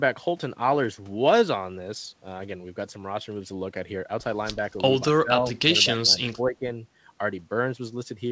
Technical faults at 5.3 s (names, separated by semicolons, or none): speech suppressed in double talk